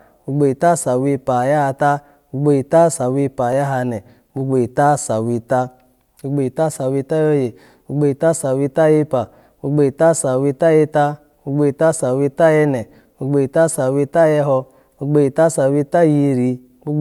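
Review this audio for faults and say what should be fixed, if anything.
Dropped samples at 3.53 s: a single sharp click cuts through the speech at that instant, visible as a thin vertical line running across the whole spectrum. The likely cause is a fraction of a millisecond of audio going missing from the stream, so the waveform leaps straight from one value to a later one instead of moving smoothly between them. The gap is far too brief to remove any audible sound. Only the discontinuity is heard. To prevent it, give the capture or playback path enough buffer headroom that it never runs short and skips ahead.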